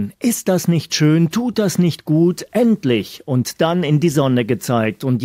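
No faults turn up anywhere in the clip.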